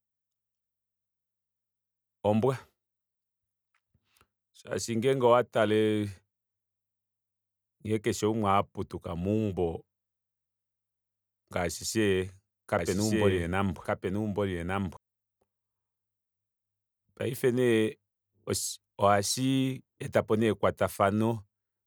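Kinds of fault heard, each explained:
Doubled audio track: From 12.79 to 14.97 s the speech is heard twice, with a second, equally loud copy trailing about a second behind the original. The copy is dry and full-band, with no fading tail or added room sound, and it cuts in and out abruptly at those edges. The likely cause is a second capture of the same signal through a slower route, or an edit that left two misaligned copies overlapping.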